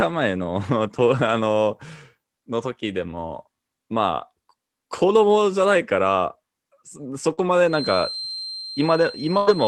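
Short concealed packet loss at 7.33 to 7.40 s: about 40 ms of the call arrived too late for the decoder, so the receiver extended the preceding sound by its pitch or as shaped noise and then crossfaded back, leaving a brief smear or wobble. The same happens again at 8.59 to 8.66 s.

A lost packet rebuilt from error correction sits inside each of those gaps, at 7.37 to 7.39 s and 8.63 to 8.65 s, and again at 9.47 to 9.49 s. Each is a 20 ms frame decoded from the low-bitrate backup copy carried in the following Opus packet, so there is no silence, but the frame sounds rougher and noisier than the audio around it.

A feedback whistle enters at 7.65 s and continues to the end. It is a thin, steady tone near 4.1 kHz, about 15 dB below the speech, swelling and fading slowly in level. The likely cause is a loudspeaker-to-microphone loop held just short of runaway feedback.

A burst of packet loss at 9.37 to 9.50 s removes about 100 ms. 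Concealment stretches the last sound into a held buzz or hiss that fades as the gap lengthens, and the audio then resumes further on. Throughout the clip, the Opus call path at 32 kbps limits the audio to about 12 kHz.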